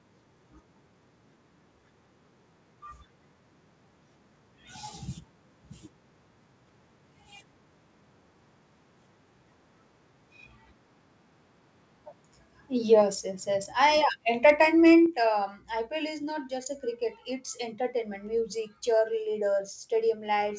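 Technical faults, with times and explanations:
13.02 s and 15.06 s, microphone volume stepped down: the speech, along with the background under it, drops abruptly in level twice, by about 4 dB right before "yes yes" and then by about 6 dB two seconds later, with no fade either time. Each drop is a single clean step, which points to the call software having likely turned the microphone's input gain down because it judged the level too hot, while the G.722 call path keeps everything capped at 8 kHz.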